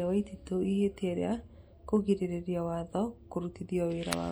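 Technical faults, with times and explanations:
Throughout, MP3 compression: plainly audible watery, swirly speech with smeared attacks, likely from bit-starved MP3 encoding consistent with roughly 64 kbps.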